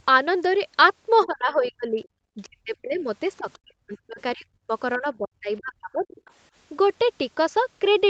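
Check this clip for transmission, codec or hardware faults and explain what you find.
Two echo-canceller faults recur through this speech clip, both during moments when the far end talks over the near talker.

Speech suppressed in double talk occurs at 1.24–1.98 s, 2.35–3.07 s, 3.38–4.73 s and 4.98–6.23 s. The likely cause is an echo canceller that cannot separate the talker from loudspeaker echo and attenuates both. The voice sinks by roughly 30 to 40 dB, dipping or breaking into fragments.

The other side's voice leaks through at 1.63–1.69 s, 2.94–3.01 s, 3.37–3.59 s and 6.26–6.30 s. The likely cause is residual loudspeaker pickup that the canceller failed to remove. These brief scraps of a second voice sit roughly 25 to 35 dB below the talker's level.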